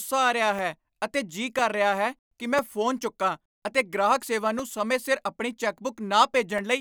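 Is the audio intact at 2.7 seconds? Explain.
No, 2.7 s falls inside a run of periodic USB or driver dropouts lasting from 0.59 s, just after "ਆ ਰਿਹਾ", to 6.59 s. Roughly once a second, something stalls the driver and a couple of milliseconds of speech drop to silence, giving about seven evenly spaced ticks.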